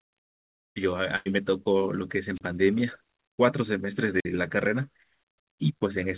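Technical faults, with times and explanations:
1.16 to 1.28 s, burst of packet loss: about 95 ms of the gap is filled by stretching the last bit of speech. It fades into a held buzz or hiss, and the sound resumes about 100 ms further along, with that stretch simply gone. No static builds up beforehand. The gap is filled with a synthetic continuation rather than silence, and the timeline jumps ahead. These traits set it apart from a radio dropout.
2.34 to 2.42 s and 4.18 to 4.25 s, wireless microphone squelch dropout: each time, hiss swells briefly as the radio link weakens. The receiver's squelch then cuts the output to near silence, for about 32 ms the first time and about 48 ms the second, before the sound returns. Unlike the packet loss, nothing is smeared across the hole. It is a true mute, and the narrow band of the call line, with nothing above 4 kHz, carries the hiss as well.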